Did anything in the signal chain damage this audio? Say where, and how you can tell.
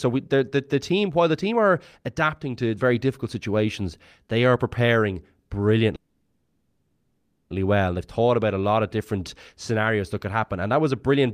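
Yes. A call audio freeze runs from 5.95 to 7.52 s. The last sound is stretched into a fading buzz for 1.55 s, with a brief silence, then the speech resumes where it stopped, nothing lost. This points to delayed network packets likely emptying the jitter buffer.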